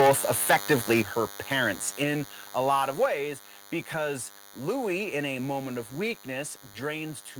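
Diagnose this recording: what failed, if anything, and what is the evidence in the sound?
DECT cordless phone buzz, analogue wiring: a thin 100 Hz buzz rich in harmonics runs throughout, roughly 20 dB below the speech, from rectified 10 ms radio bursts.

Microphone overload at the converter: from 0 to 1.01 s the loudest syllables crackle harshly, peaks likely driven about 10 dB past full scale and clipped flat.

Microphone volume stepped down in call processing: voice and background drop suddenly, about 6 dB at 1.02 s and about 4 dB at 3.06 s after "a lot of", likely automatic gain reduction.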